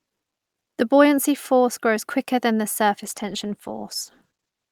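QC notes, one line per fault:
3.06–4.71 s, call bitrate drop: right after "grows quicker than the", the sound turns rough and watery, with the top end muffled through to the end. This fits the encoder being throttled from around 64 kbps to about 13 kbps, coding coarsely and trimming high frequencies.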